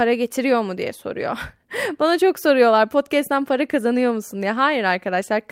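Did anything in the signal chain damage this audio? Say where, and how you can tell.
No, nothing along the chain has left an audible mark on this speech recording, and the signal holds steady and continuous throughout.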